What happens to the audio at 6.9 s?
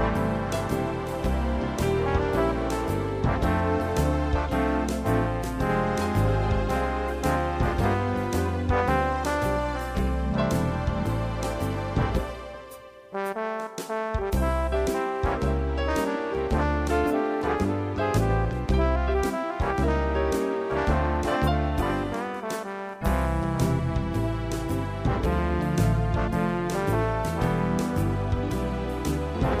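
At 6.9 s the audio runs on without interruption, with no dropout, click, glitch or other fault at that point.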